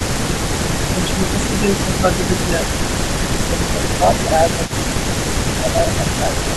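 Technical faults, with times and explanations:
0.93–4.6 s, speech suppressed in double talk: the speech dips in pieces, about 10 dB at the deepest and roughly a second in total, likely because the echo canceller turned down the talker along with the far end. Unlike an echo, nothing is added; the talker just loses level.
4.66–4.72 s, echo leak: a brief, faint copy of the speech arrives 252 ms late, about 25 dB below the direct sound. This is likely loudspeaker pickup that the canceller failed to remove. Unlike suppression, this adds a delayed duplicate instead of reducing level.
5.09–5.15 s, speech suppressed in double talk: a short dip of about 5 dB, around 70 ms long, likely the canceller briefly attenuating the talker while both sides overlap. It is shallower and much shorter than the first stretch, with no trailing copy.
5.63–6.56 s, speech suppressed in double talk: the speech drops by about 5 dB in intermittent pieces, roughly 400 ms in total, likely the same double-talk attenuation. 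The talker's own level falls, which separates it from the echo leak's late duplicate.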